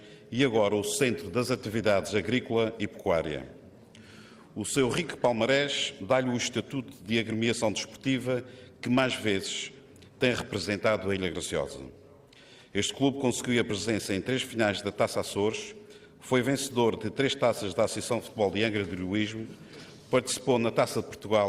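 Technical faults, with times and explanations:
Nothing here points to a technical fault: no dropouts, glitches or other trouble turn up anywhere in the audio.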